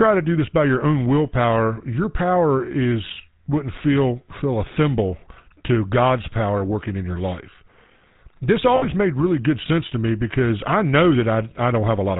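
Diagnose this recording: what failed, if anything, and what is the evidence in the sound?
The codec stage is at fault. Throughout, the speech carries a plainly audible buzzy, gravelly roughness and nothing above 4 kHz. That is the GSM full-rate codec, which fits a 13 kbps coder. It rebuilds the voice from a vocal-tract model driven by coarse, regularly spaced pulses.

The transmission path shows lost GSM frames from 8.76 to 8.86 s, just before "made really good sense". The sound there freezes into a rough, metallic ring as the decoder repeats the last good frame. This fits roughly 60 ms of lost frames.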